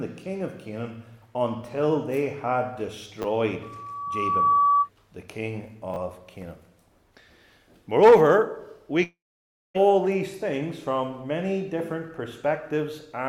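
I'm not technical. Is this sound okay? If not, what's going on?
No. At 3.22–3.24 s and again at 5.94–5.96 s there are chunks out of order: a tiny 10 ms piece plays one slot late, giving a brief jumbled moment.

From 3.63 to 4.89 s there is a loudspeaker feedback squeal: a microphone hears its own speaker, and a 1.2 kHz tone swells over about a second into a whistle.

From 9.03 to 9.84 s the sound turns into a fading buzz, then goes silent, and resumes with roughly 0.7 s missing. This is likely a long network dropout.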